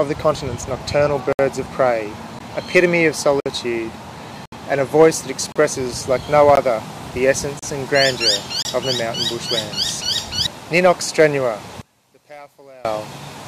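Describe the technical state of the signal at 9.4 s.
At 9.4 s the signal is intact, with no dropout, distortion, clipping or other fault audible at that point.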